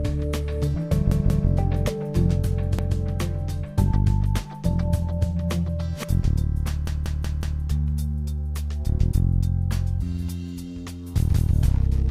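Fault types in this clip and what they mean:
Repeated buffer: new audio arrived late, so the device replayed its last 186 ms block, causing hard-edged stutters that repeat up to four extra times.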